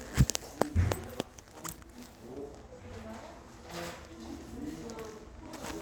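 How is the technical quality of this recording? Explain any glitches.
The quality suffers from one fault, a call bitrate drop from 0.58 to 2.51 s. The bandwidth estimate fell, forcing the encoder down to a much lower bitrate, which fits a fall from around 128 to 24 kbps, held at its lowest for about 1.9 s. The coarser coding sounds rough and watery, and the top end is cut away, leaving the sound muffled until the bitrate recovers.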